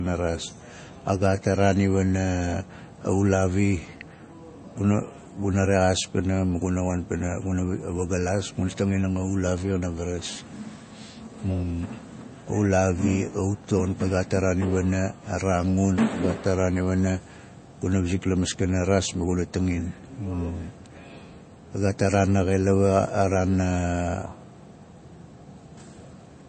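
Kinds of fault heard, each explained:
MP3 compression: Nothing is heard above 8.3 kHz, and coding damage is plainly audible across the speech. This is likely an MP3 encoder short of bits, fitting a bitrate near 32 kbps. It cuts the treble and lets weak components flicker between frames.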